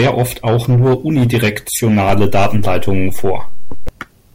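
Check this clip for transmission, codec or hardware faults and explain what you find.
There's one fault here, a DC step. At 2.09 s the waveform's zero line jumps by about -10 dBFS, which fits a converter recalibrating or an offset input switching in, and it ends at 3.89 s. Each jump gives a low thump while the speech carries on unchanged.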